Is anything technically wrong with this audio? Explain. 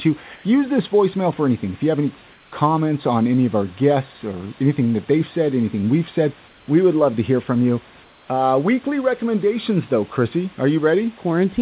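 Yes. In four pauses the real background drops out and is replaced by synthetic noise, which is likely comfort noise in place of the background. This happens at 0.36 to 0.44 s, at 2.32 to 2.52 s (between "you have any" and "on any of our"), at 6.48 to 6.68 s (after "said anything we've said") and at 8.04 to 8.28 s (after "to hear from you"). During silence the sender's voice detector stopped transmitting, and the receiver generated shaped noise to fill each 80 to 240 ms gap. Each patch is a steady, featureless hiss, about 31 to 33 dB below the loudest speech, sitting roughly 3 dB quieter to 1 dB louder than the room noise around it. The audio is also band-limited at 4 kHz, consistent with a narrowband telephone codec.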